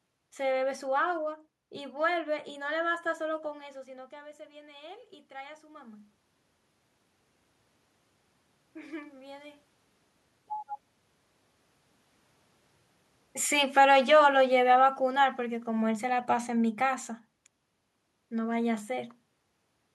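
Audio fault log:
3.28–6.09 s, automatic gain rising: Early in this stretch, around 3.5 s, the talker moves away and the input drops by about 18 dB. The automatic gain control treats the quieter input as too weak and raises its gain by about 7 dB over nearly three seconds. The voice swells back gradually rather than at once, and the room noise rises with it, because the gain lifts everything reaching the microphone, not just the voice.
13.58–17.39 s, automatic gain falling: Here the automatic gain control judges the input too loud, or its background noise too strong, and pulls its gain down by about 5 dB, easing it off over roughly four seconds. The voice starts at its fuller level and then sinks steadily. The room noise sinks in step with it, which shows the drop comes from a gain change applied to the whole signal rather than from the talker speaking more softly.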